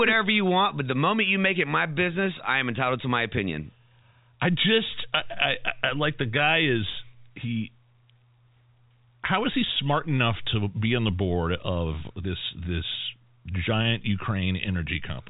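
No technical faults can be heard anywhere in the speech. The sound has the narrow band of G.711 telephone coding, with nothing above about 3.8 kHz and at most a faint grain that rises and falls with the level.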